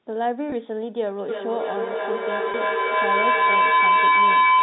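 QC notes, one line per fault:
0.50 s and 2.52 s: packet loss with pitch repetition. Each 20 ms gap, one packet's worth, is bridged by repeating the last pitch period, heard as a briefly held, buzzy tone.
1.28 s to end: feedback howl. A microphone-to-loudspeaker loop gains level every trip, building a tone near 1 kHz that pulses roughly every 300 ms and peaks about 10 dB above the speech.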